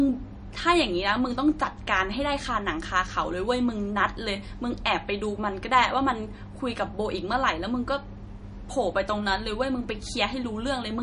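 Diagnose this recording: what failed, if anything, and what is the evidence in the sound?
MP3 compression, throughout the speech. The stage is the codec: the damage is plainly audible for the whole length, with nothing at all above 10.5 kHz, a hard ceiling that fits an encoder squeezed to a low bitrate around 40 kbps. Starved of bits, it likely dropped the top of the spectrum outright and zeroed quieter frequency lines, which then flicker in and out between frames. That gives the watery, swirling texture on the voice and the blurred attacks on consonants.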